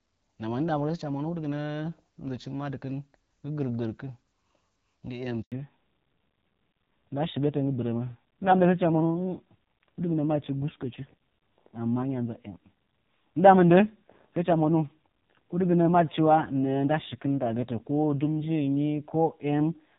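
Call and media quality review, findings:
Handover gap, 5.42–5.52 s: 100 ms dead silence during the network switch, no speech frames delivered. Flat waveform, blank vertical strip on the spectrogram.

Fallback to narrowband, from 5.52 s to the end: HD Voice path (wideband codec) drops to a low-rate narrowband codec. Spectrogram shows a hard ceiling at 4 kHz, and the speech sounds duller and rougher.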